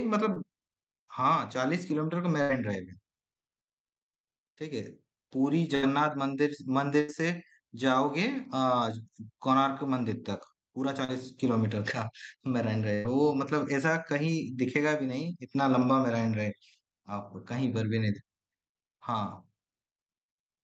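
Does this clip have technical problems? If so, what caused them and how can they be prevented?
Yes. Short concealed packet loss appears at 0.33 to 0.38 s and 11.04 to 11.10 s. Brief stretches of about 20 ms and 40 ms arrived too late. The receiver extended the preceding sound to cover them, leaving a small smear. A steadier network path or forward error correction would prevent it.

Burst packet loss occurs at 2.42 to 2.51 s, 5.75 to 5.84 s, 7.00 to 7.10 s and 12.94 to 13.06 s. Each time, 80 to 100 ms went missing. The decoder held the last sound, letting it fade as a buzz or hiss, then jumped ahead. A larger jitter buffer and a less congested connection would prevent it.

The speech passes through an Opus call path, with content above about 8 kHz removed.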